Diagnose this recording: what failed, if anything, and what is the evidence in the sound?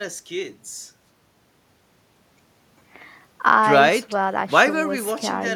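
Nothing failed in this speech recording, and no stage of the chain leaves any audible evidence of trouble. There is no event anywhere in the sound that needs a time stamp or a mechanism to explain it.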